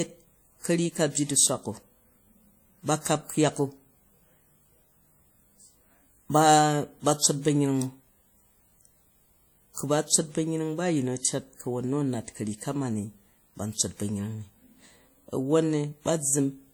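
Throughout the speech there is plainly audible WMA compression, likely from a transform encoder run at a low rate, around 48 kbps. Quantisation noise smears across tens of milliseconds, so the speech rings and turns washy, with a hiss that swells and fades alongside the signal. Content still reaches 20.1 kHz, which separates this from simple band-limiting: the damage is smeared texture, not missing top end.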